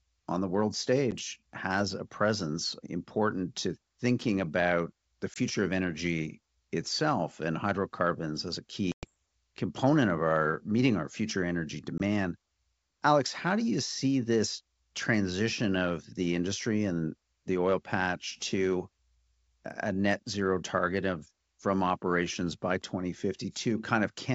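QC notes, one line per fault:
1.11–1.14 s, 5.34–5.37 s, 8.92–9.08 s, 11.98–12.01 s, packet loss on an ADPCM call: hard-edged silent holes, the longest around "and hydrocarbons as a" before "component of our meeting", the first after "on the world". The gaps fit one or two lost packets each, the longest around ten. The wideband G.722 stream's adaptive predictor and step size lose sync with the sender, so speech comes back slightly distorted, settling within some tens of milliseconds.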